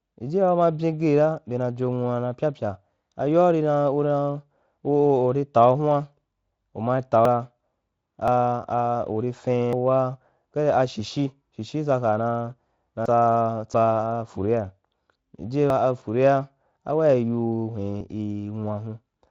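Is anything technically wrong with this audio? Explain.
Yes, there are seven abrupt skips at 7.25, 8.28, 9.73, 13.06, 13.74, 15.70 and 18.01 s. Each one jumps ahead roughly 0.1 to 0.15 s with no gap, likely a dropped buffer (overrun) where incoming audio was overwritten before being read.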